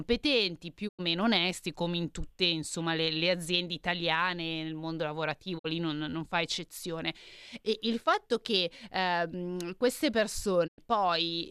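The speech goes silent three times, each gap opening with a short fade of about 20 ms: at 0.87 s, just before "onesti come in tutte"; at 5.57 s, between "aziende italiane nel mondo" and "lì non non fa"; and at 10.66 s, right after "fatto che ehm queste". The first and last holes last about 0.1 s, the middle one about half that. This is digital broadcast dropout: the receiver stopped getting usable frames and muted until good ones arrived, so the sound from those moments is gone. The gap lengths fit the loss of four, two and four frames of roughly 24 ms each.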